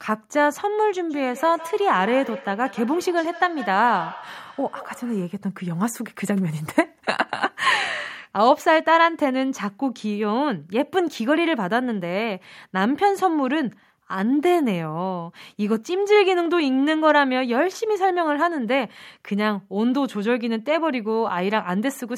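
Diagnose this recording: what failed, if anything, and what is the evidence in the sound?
The failure is in call processing: a feedback echo between two devices, from about 1.1 s to 5.38 s. The speech comes back at a fixed spacing of roughly 150 ms, peaking about 15 dB below the direct sound. Two devices in the same room are on one call, and each microphone re-captures the other's loudspeaker. Each echo canceller removes only its own playback, so the loop survives. Room reverberation would give a smooth decay with no discrete spacing, not returns at one steady interval.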